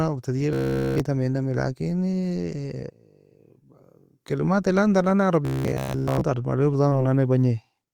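Robotic sound from repeated short buffers hits this speech recording at 0.53–1.00 s and again at 5.45–6.21 s, right after "لازم tan nan nae". Throughout both stretches a fixed metallic buzz near 66.8 Hz runs through the speech, likely because late-arriving audio was covered by looping one roughly 15 ms buffer over and over. Short concealed packet loss appears at 5.81–5.85 s, where about 20 ms went missing and 15 ms was synthesized, and at 6.89–6.93 s, where 21 ms was filled. Each shows up as a brief smear where the decoder extended the preceding sound before blending back.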